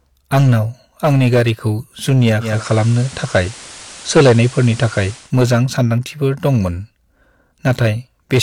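Throughout the speech, hard clipping from roughly 11 dB of overdrive flattens a few percent of samples at the peaks, adding a harsh fuzz to every loud syllable.

At 2.39 s, after "आंनि गारिखौ जुनिया", digital radio blending to analogue crossfades over 265 ms to the FM signal. Level shifts about 2 dB, and hiss rises to around 20 dB below the speech until 5.34 s.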